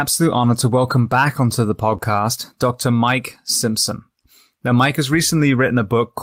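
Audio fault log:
0.89–1.11 s, 1.89–1.95 s, 2.01–2.03 s and 4.92–4.94 s, lost packet rebuilt from error correction: after "honor to" the sound turns rougher and noisier for 120 ms, then briefly after "onto the" and again later. Low-bitrate copies carried in following packets replaced the lost ones, so there is no gap.
1.97–2.12 s, short concealed packet loss: just after "onto the" there is a brief smear where about 20 ms of audio arrived too late. The decoder extended the preceding sound for about 12 ms and blended back, and timing stretches by around 10 ms.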